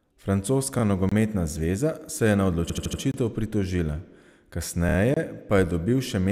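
Speech, with two faults. In the gap between chunks fault, the audio is handled in 2-second chunks and 25 ms of silence is left at each join, so short holes cut into the speech at 1.09, 3.12 and 5.14 s. In the repeated frames fault, compressed blocks were decoded more than once: a 78 ms block plays four extra times from 2.69 to 3.01 s, and a 26 ms block three extra times from 4.89 to 4.96 s. Both heard as stutters.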